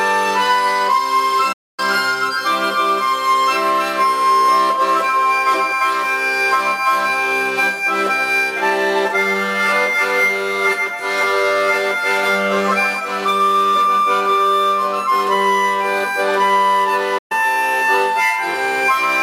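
The sound cuts to silence from 1.52 to 1.80 s and again from 17.18 to 17.32 s, then resumes. These playback stalls likely came from the player running short of data.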